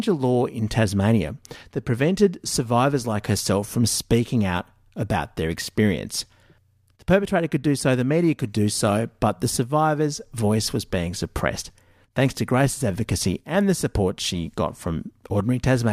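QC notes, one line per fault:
No faults found in the speech recording. Nothing heard at any point calls for a flag.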